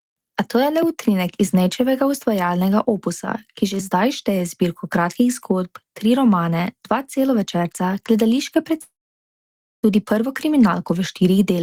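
From 8.81 to 9.85 s the speech stops abruptly. The final sound trails on as a fading buzz, then about 0.91 s of near silence follows, most likely a long network dropout. Unlike a brief packet-loss click, speech resumes with roughly one second simply missing.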